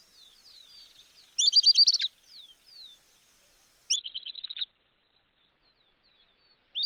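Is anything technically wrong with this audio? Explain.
Yes. A call bitrate drop starts at 3.97 s and lasts to the end: the encoder was starved of bits, consistent with a fall from about 48 kbps to 7 kbps, and the audio band shrinks from 20 kHz to 4 kHz. For about 1.3 s at its lowest, the sound turns muffled, rough and watery.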